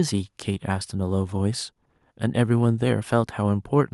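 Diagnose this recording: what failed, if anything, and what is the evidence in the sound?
Nothing in the recording points to a failure at any stage of the chain. The speech comes through with no audible defect to diagnose.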